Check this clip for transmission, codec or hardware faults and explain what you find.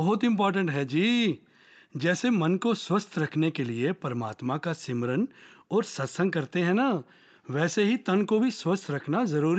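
No transmission, codec or hardware faults.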